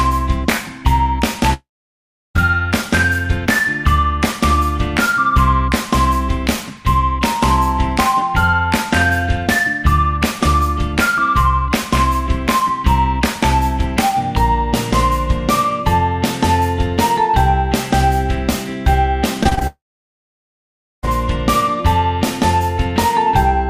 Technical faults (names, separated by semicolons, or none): long network dropout; repeated packet loss (robotic sound)